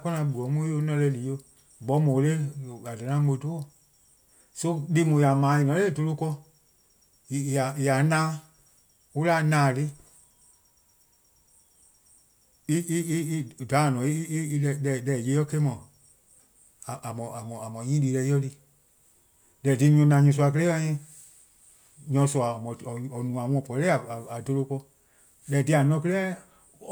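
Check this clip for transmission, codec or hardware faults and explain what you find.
Nothing stood out on listening to this speech recording.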